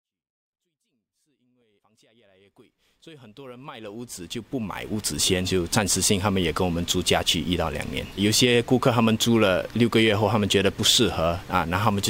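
No technical faults can be heard in the audio. The level rises in a smooth fade-in from the very beginning and reaches full level at 5.22 s, with no click or hard edge.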